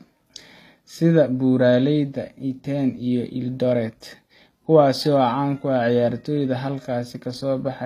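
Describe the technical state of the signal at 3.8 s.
At 3.8 s the speech carries the same plainly audible damage that runs through the whole clip, most likely HE-AAC compression at a low bitrate, consistent with roughly 24 kbps. The lower band is coded directly while the treble is rebuilt by copying lower bands upward, so s sounds come out gritty and lispy. On a spectrogram the upper region looks smeared and blocky, repeating lower patterns, with nothing above 14.9 kHz.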